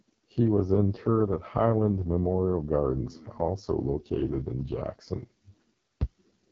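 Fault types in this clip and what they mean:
AMR wideband (HD Voice) codec: The speech sounds rough and raspy throughout, with nothing above 7.5 kHz. The codec rebuilds speech from a pulse-driven vocal tract model and fills the top band with shaped noise; damage this heavy fits its lowest 6.6 kbit/s mode.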